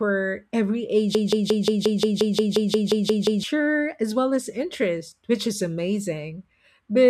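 A broken-record loop runs from 1.15 to 3.43 s, likely from a stalled stream replaying the last fragment it held. A 0.18 s slice of the speech repeats exactly, back to back, 13 times. The audio meant for that span is lost, and playback resumes at "as well as".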